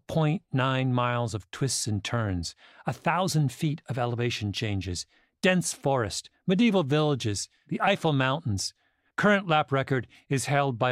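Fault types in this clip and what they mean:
No faults can be heard anywhere in this speech recording.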